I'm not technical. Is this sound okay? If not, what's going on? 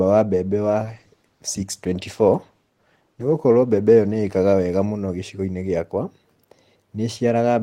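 No. From 0.64 to 5.05 s there is a call bitrate drop: the connection squeezed the audio into far less data, so the speech turns rough and muffled before recovering.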